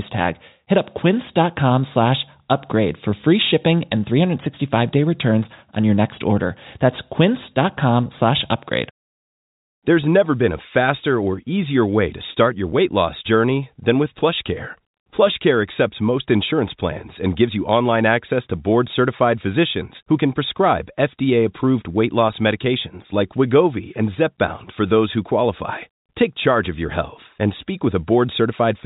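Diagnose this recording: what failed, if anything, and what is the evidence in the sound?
Nothing has failed: the speech carries the ordinary band-limit of G.711 telephone coding, with no content above about 3.8 kHz and at most a faint level-following quantisation hiss, which is exactly what a normal 64 kbps telephone path leaves behind.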